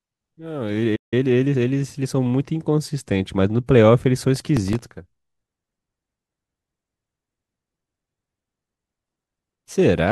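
At 0.95 s the speech cuts to silence for 161 ms, until 1.14 s. This playback stall was likely the player running out of data.

From 1.14 to 1.78 s a time-compressed catch-up follows. The speech runs 1.25 times fast at normal pitch.

From 4.21 to 4.81 s comes processor overload crackle. Many very short buffers miss their deadlines, each replaying a scrap of old audio. The result is a gritty tearing over the speech.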